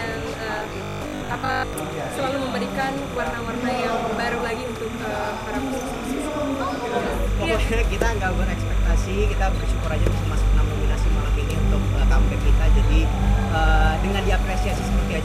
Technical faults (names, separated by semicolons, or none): timecode bleed; robotic sound from repeated short buffers